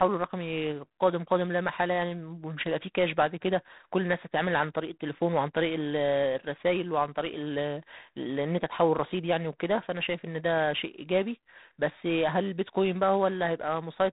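G.726 ADPCM coding runs through the whole speech clip. Each sample is sent as a few bits describing how far the signal strays from an adaptive prediction, and the coarse steps here leave a harsh, rasping hiss that rises and falls with the speech level, which fits the 24 kbit/s mode at three bits a sample. The damage is plainly audible, and nothing passes above about 3.9 kHz, so the speech sounds narrow and telephone-like.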